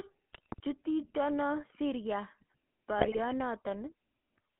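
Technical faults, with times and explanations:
Throughout: GSM full-rate codec. The sound has the buzzy, gravelly roughness of a vocal-tract model driven by coarse pulse excitation, which fits 13 kbps full-rate coding. A spectrogram shows nothing above about 3.4 kHz or below 200 Hz, with smeared, grainy harmonics.
0.33–0.60 s and 2.98–3.21 s: GSM bit errors. Corrupted filter, pitch and gain values make the decoder squawk and gargle, with sudden level jumps. The waveform shows abrupt frame-length bursts, and the spectrogram shows smeared, misshapen formant bands in blocks of about 20 ms.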